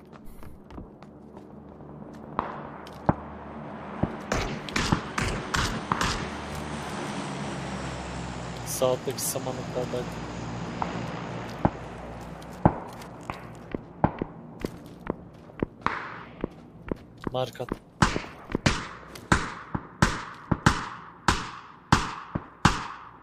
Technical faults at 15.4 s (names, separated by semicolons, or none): none